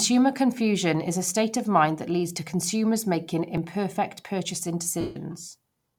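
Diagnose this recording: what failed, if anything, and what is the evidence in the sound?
Lost LE Audio frames, 5.01 to 5.16 s, at the Bluetooth link and LC3 decoder stage. For about 150 ms near the end of the speech, the sound turns into a noisy, buzzy smear that thins and decays toward silence. With no frames arriving, the decoder repeats the last good spectrum with randomised signs and fades it after the first few frames. The gap's length fits roughly 20 lost frames at 7.5 ms each.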